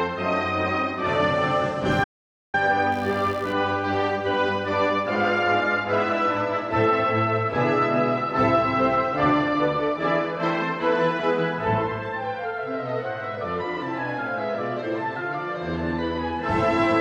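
From 1.92 s to 5.15 s a computer activity noise sits under the sound: a buzzy, chirping pulse at roughly 70 per second, around 30 dB below the signal. Processor or graphics load is shifting the shared ground. Its rhythm follows the machine's activity rather than the sound, which sets it apart from ordinary mains hum.

At 2.04 s, inside that buzz, an audio dropout to silence cuts everything for about 0.49 s until 2.54 s, likely from the input link briefly failing while silence was written. Unlike a quiet passage, the gap holds no room tone at all, not even the buzz.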